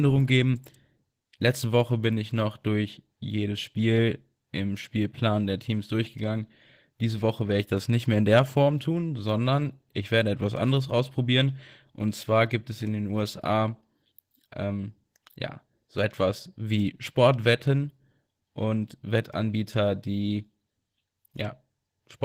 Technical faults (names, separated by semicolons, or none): Opus voice compression